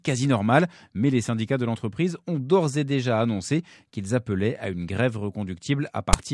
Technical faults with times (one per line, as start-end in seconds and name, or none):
6.13 file tags played as audio